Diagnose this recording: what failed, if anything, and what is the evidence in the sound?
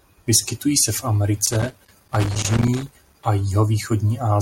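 The failure is in the analogue wiring: a loose connector crackle runs from about 1.46 s to 3.25 s, starting just after "se v". For nearly two seconds the speech is broken by an irregular burst of scratching and crackle as a worn or dirty contact makes and breaks, chopping the signal. Buffer underruns leave regularly spaced gaps, whereas the spacing here is ragged, as a contact moving under strain would produce.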